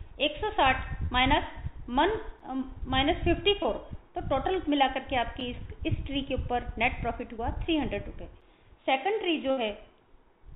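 Short concealed packet loss at 1.06 s, 2.57 s, 3.63 s and 7.37 s: each time about 20 ms of audio failed to arrive, which fits a 20 ms packet. The receiver filled the gap by extending the preceding sound and blending back in, so each spot is a brief smear or wobble lasting roughly 30 to 40 ms.

Gap between chunks at 2.40 s, 5.40 s and 8.41 s: the audio was delivered in 3-second pieces, and a 7 ms stretch of silence was left at each join. Nothing is missing, but each join is heard as a tiny dropout recurring every three seconds.

Burst of packet loss from 9.51 to 9.59 s: about 60 ms went missing in one run. The concealment held and faded the last sound, producing a short buzz or hiss, and the audio resumed with that stretch gone. Throughout the clip, the G.711 call path's 4 kHz ceiling gives the sound its narrow telephone band.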